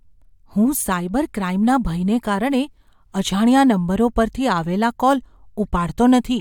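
Speech recording, with nothing technically wrong to be heard anywhere in it. No fault turns up at any point, so there are no times or causes to report.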